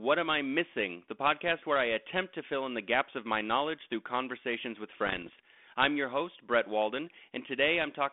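From 5.06 to 5.43 s, between "knowledge through conversations with" and "I'm your host", bit errors on an ADPCM link cause pops and rough bursts. Unlike isolated clicks, each flipped bit upsets the decoder's adaptation, so the damage rings on briefly with wavering level.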